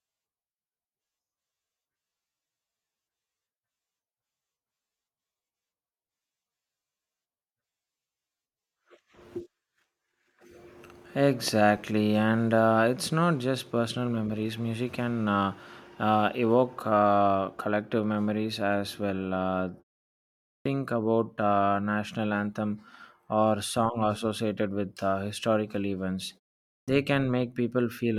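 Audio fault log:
20.60–20.65 s and 26.82–26.88 s: clipped start after a pause. Speech begins abruptly out of silence, first at "about uh national anthem" after a 0.85 s pause, then after "with uh historical events" and a 0.51 s pause. Roughly 54 ms and 57 ms of onset are missing. The output device sleeps during silence and takes that long to wake.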